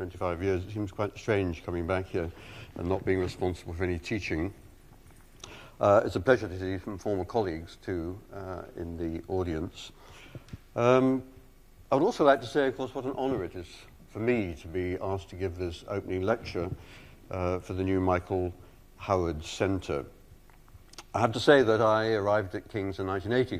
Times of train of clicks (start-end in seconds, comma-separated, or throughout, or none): none